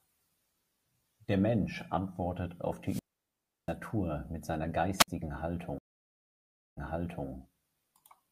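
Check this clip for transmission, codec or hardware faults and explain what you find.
There are three faults here: two wireless-mic squelch dropouts and one stream reconnect near the end of this speech clip.

Wireless microphone squelch dropout, 2.85 to 3.75 s and 4.97 to 5.08 s. The analogue FM signal fades far enough that the receiver's squelch shuts the output. The first cuts in right after "antwortet auf", with a quick swell of hiss and then about 0.69 s of near silence before "mit seiner" comes back. The second, just after "mit seiner", is a short hole of roughly 57 ms.

Stream reconnect, 5.78 to 7.28 s. The connection dropped and the player went silent for about 0.98 s. It then reconnected and started a new decoder mid-stream. Playback picks up about 0.51 s earlier than where it left off, because the server resent a chunk, so you hear a bit repeated, and the first frame or so comes in muted or fading up.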